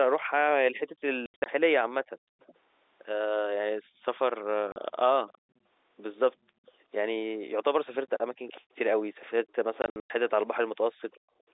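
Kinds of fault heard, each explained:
packet loss filled with silence: Lost packets were replaced with silence, leaving hard-edged holes in multiples of 20 ms at 1.26–1.46 s, 4.72–4.76 s and 9.82–10.10 s.
background gated by the echo canceller: The canceller clamped the microphone while the loudspeaker played, dropping room sound by about 40 dB around 2.16–2.38 s and within 8.61–11.48 s.
echo leak: A loudspeaker-side echo canceller likely let speech through, sending back a faint copy 370 ms late, roughly 25 dB down, from 2.38 to 9.53 s and, fainter, at 11.13 s.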